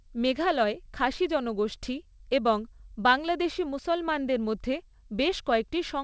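A speech clip carrying clock drift between sender and receiver. The sender's clock runs fast, by about 5 percent. Audio arrives quicker than the receiver plays it, so its jitter buffer keeps filling. The receiver must throw material away to stay in step. Repeated timing corrections follow from 0.02 s to the end at 6.04 s. The receiver trims short pieces at uneven intervals, always in the same direction. The effective speed sits near 105 percent. Each cut is small, heard, if at all, as a faint hiccup or an unsteady pace. The call path leaves nothing above 8 kHz, which fits a G.722 wideband codec.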